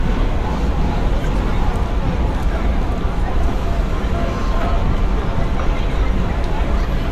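No technical faults are audible.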